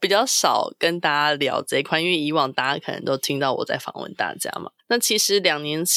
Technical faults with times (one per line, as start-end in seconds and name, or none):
none